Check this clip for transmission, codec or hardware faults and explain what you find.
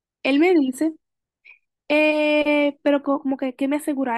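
One fault, late in the speech. From 2.88 s to the end there's channel delay (comb filtering). One channel lags the other by a tiny fraction of a millisecond, just a few samples. Summed to mono, shared content cancels at evenly spaced frequencies, starting around 7 kHz, so it sounds hollow or phasey, with fixed notches.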